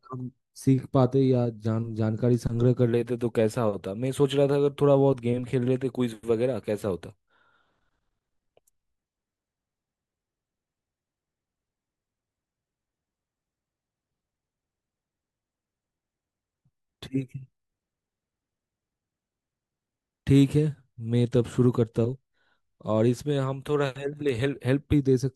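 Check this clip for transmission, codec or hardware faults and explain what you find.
One fault turns up, near the end of the speech. A bit error spike occurs at 24.29 s: a single sample jumps to about -19 dBFS and immediately returns. One bit flipped in storage or on a digital link, so the value leapt by a power of two for just one sample, with no relation to the speech around it. It is heard as one sharp, broadband tick, brief and spread across the spectrum.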